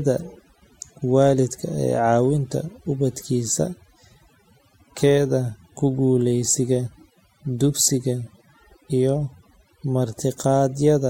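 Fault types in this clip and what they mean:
overdone noise removal: A noise reduction process was pushed far too hard on this speech, so every frequency band it judged close to the noise floor was pulled down or switched off, and quieter parts of the voice went with it. Throughout the clip the background drops and breaks up into twinkling specks. A spectrogram shows isolated flickering points between words and ragged, gapped harmonics; the waveform looks unnaturally clean in pauses.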